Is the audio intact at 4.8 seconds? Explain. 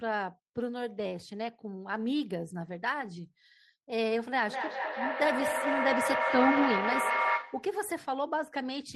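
No. From 4.46 to 7.8 s there is feedback echo between two devices: one device replays the other's microphone signal, which is picked up again and recirculates. Repeats arrive about every fifth of a second, thinner and ringing, building to about 1 dB above the speech instead of decaying like a single echo.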